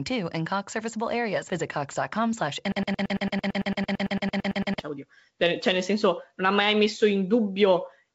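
Speech, heard through a call path that carries nothing above 8 kHz, with a broken-record loop from 2.72 to 4.79 s. A 112 ms fragment repeats exactly, back to back, until the sound resumes at "oddio cioè nel". Unlike an echo it never fades, and the speech that should fill that span is lost, likely because the player or stream stalled.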